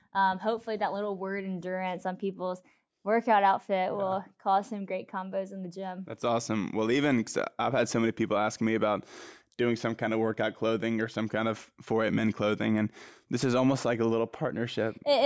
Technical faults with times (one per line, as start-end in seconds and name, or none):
none